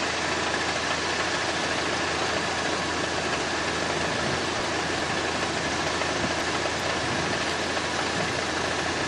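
The audio has chunks out of order three times: 2.8 to 3.6 s, 4.6 to 5.2 s and 6.4 to 6.8 s. In each, a block of sound plays after material that should follow it, arriving three, two and then one block late. The step lengths fit 200 ms chunks. Each jumbled passage has three hard joins. On a spectrogram these show as boundaries with mismatched content on either side.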